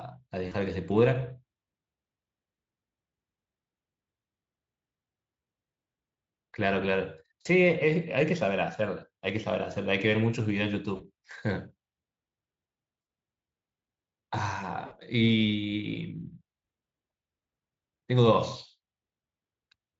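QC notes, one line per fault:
0.47–0.54 s, 7.41–7.46 s, 10.95–11.03 s, 13.01–13.07 s, 14.85–14.94 s: VoIP packet loss concealed by the speech codec. About 40 ms of audio drops out in the first three gaps and about 60 ms in the last two. The decoder fills each gap by repeating its last pitch and spectral envelope at falling gain, which produces a brief, smeared buzzy tone or coloured noise that fades. The decoder's state then needs time to recover, so the voice stays weak or distorted for tens of milliseconds or more after each gap.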